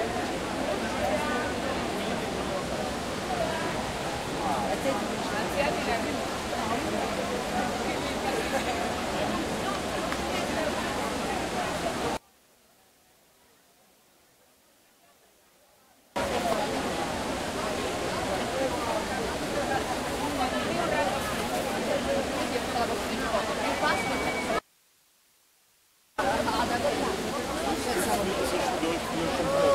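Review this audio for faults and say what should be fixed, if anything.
From 12.17 to 16.16 s the sound sinks about 34 dB, likely one channel inverted cancelling in mono; the waveform collapses and the spectrogram empties. Check channel polarity before mono summing.

From 24.59 to 26.18 s the audio cuts abruptly to faint hiss about 35 dB down for 1.59 s, an audio dropout to a faint residue, seen as faint broadband noise. Secure the source connection feeding the chain.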